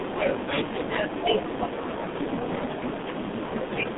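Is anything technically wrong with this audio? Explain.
Yes. Throughout the clip the speech has passed through the G.723.1 codec, a narrowband telephony coder that rebuilds the voice from a compact model refreshed only every 30 ms. The damage is heavy, consistent with its 6.3 kbit/s mode. Nothing survives above 3.8 kHz, and the usable band runs from about 150 Hz to 3.6 kHz. The voice therefore sounds muffled and hoarse, and consonants smear together because the slow model updates cannot follow quick changes.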